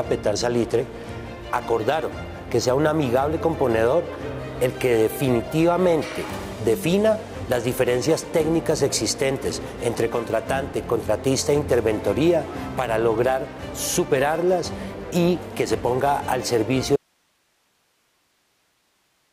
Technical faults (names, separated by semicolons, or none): audio dropout to a faint residue